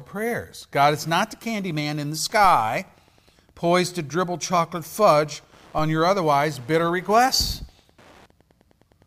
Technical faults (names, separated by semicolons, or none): Wi-Fi interference; DC step